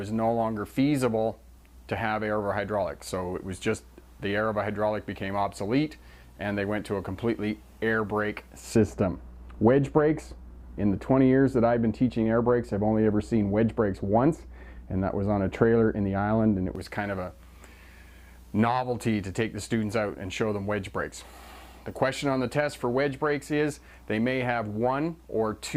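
From 8.75 s to 16.75 s the sound turns dull and muffled. This is de-emphasis applied wrongly. A treble cut meant to reverse pre-emphasis was applied where there was none to reverse, or applied a second time. The top end rolls off smoothly and steadily. By 10 kHz it sits about 11 dB below the level at 1 kHz. Brightness and crispness drain away. At 16.75 s the full treble returns.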